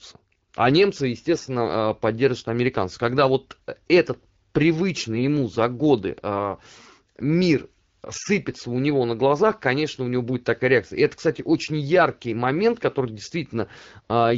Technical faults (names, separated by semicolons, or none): AMR bit errors